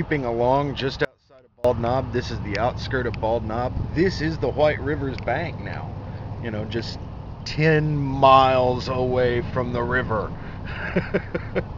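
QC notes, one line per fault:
1.05–1.65 s, audio dropout to a faint residue: the sound cuts out abruptly for about 0.6 s and returns just as suddenly, with no fade on either edge. The gap is not silent. A faint trace of the sound carries on, roughly 30 dB below its normal level. This is likely a momentary loss of the wanted signal while the path downstream stayed live, so only leakage gets through until the feed recovers.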